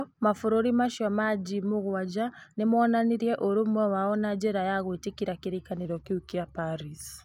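From 5.85 s to the end, just after "na njĩra ya gwĩtĩkĩra", the speech drops about 1.5 semitones and slows to 0.919 times its speed. This is a wrong sample rate, with samples played unconverted at a lower rate, which fits 48 kHz audio played at 44.1 kHz.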